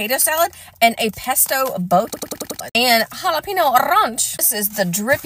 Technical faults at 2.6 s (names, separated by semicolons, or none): system hang loop